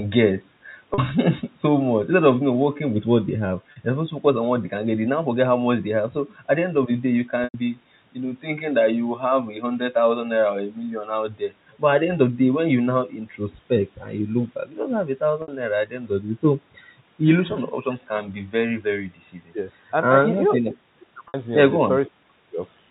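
At 0.94 s and 3.72 s, 40 ms of speech drops out. The gaps are bridged by packet loss with pitch repetition: the receiver loops the last pitch period. Each sounds like a brief held, buzzy tone. At 7.44 s a 100 ms loss runs longer, so the repeat fades toward silence before speech cross-fades back. At 15.42 s and 21.28 s, 60 ms gaps give a slightly longer buzz. The lengths fit lost 20 ms packets. The G.711 telephone band carries the sound around them.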